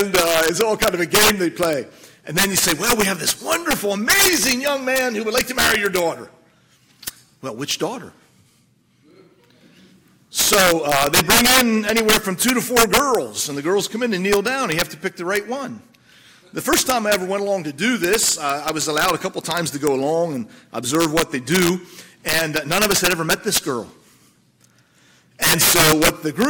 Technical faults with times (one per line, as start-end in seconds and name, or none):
0.00-26.49 integer overflow